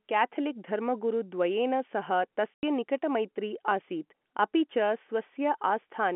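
At 2.54 s the speech drops out completely and returns at 2.63 s. This is packet loss filled with silence. About 90 ms of audio never arrived, and the receiver played nothing in its place. The gap's length fits nine lost 10 ms packets. The cut is abrupt at both ends. The band-limited telephone sound of the G.711 coding stays constant across the gap.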